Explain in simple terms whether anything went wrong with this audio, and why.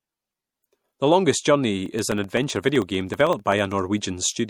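Two things went wrong. Throughout the speech there is a watery, swirly quality with smeared consonant attacks, and the treble stops dead at about 19.3 kHz. That is most likely MP3 compression squeezing the sound hard enough to be plainly audible. It is constant, unlike a passing glitch.

From 1.80 to 3.78 s, a regular tick repeats every 0.064 s, about thirty in all. Each one is a tiny gap, roughly a millisecond of audio replaced by silence. These are periodic USB or driver dropouts. Their clockwork spacing distinguishes them from random clicks or damage in the recording itself.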